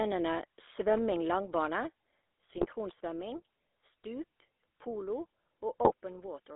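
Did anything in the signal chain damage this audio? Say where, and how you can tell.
Yes. At the codec stage, the whole clip carries GSM full-rate codec damage, plainly audible as a buzzy, gravelly roughness on the speech. The coder rebuilds the voice from a vocal-tract filter driven by sparse, regularly spaced pulses, which fits a 13 kbps full-rate stream. The line band runs from about 300 Hz to 3.6 kHz. A spectrogram shows a hard ceiling near 3.6 kHz, nothing below about 300 Hz, and smeared, grainy harmonics.

At the network stage, GSM bit errors strike from 2.50 to 2.66 s and again from 5.82 to 5.92 s. The speech breaks into squawks, pops and gargling. Corrupted filter, pitch or gain values reach the decoder, so each damaged frame gets a bent spectrum or a level jump. On a waveform these show as sudden amplitude spikes. On a spectrogram they appear as short blocks of misplaced or smeared energy.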